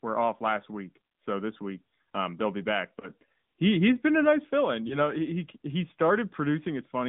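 Speech sent through the AMR narrowband mobile codec: it sampled at 8 kHz and rebuilt the voice from a vocal tract model driven by sparse pulses, with the buzzy, synthetic edge of a middle-rate mode, plausibly 10.2 kbps. The line passes only about 150 Hz to 3.7 kHz, so the low body and everything above that is gone, and the coding damage is plainly audible. Lost AMR speech frames occur twice, each sounding like a single corrupted frame. The decoder filled the gap by repeating the last good pitch and vocal tract settings at lower gain. This produces a brief dip or warble from 3.00 to 3.09 s and again from 4.88 to 4.97 s, with the voice returning weak or rough for a moment after each.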